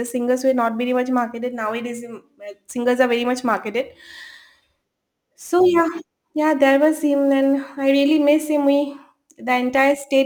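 Sample clock jitter runs through the whole speech recording, start to finish. The converter's clock wobbles by something like a few microseconds, so each sample lands a touch early or late, and the error it creates tracks how steeply the waveform is moving. You hear a grainy hiss riding on the louder, brighter parts of the speech, sitting roughly 35 dB under the signal, and it drops away whenever the sound goes quiet.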